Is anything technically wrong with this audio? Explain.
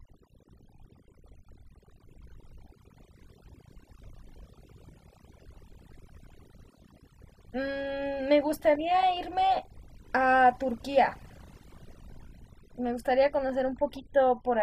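Yes. Overdone noise removal affects the whole recording, from start to finish. A noise reduction stage was pushed too hard, so any frequency band that drifts close to its noise estimate gets pulled far down or switched off, and the softer parts of the speech are caught along with the background noise. The pauses fall to near silence scattered with small twinkling, chirping specks.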